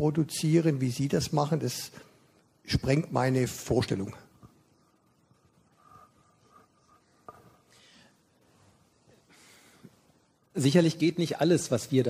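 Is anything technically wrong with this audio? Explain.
No, nothing technically wrong turns up anywhere in this audio, so there's nothing here to worry about.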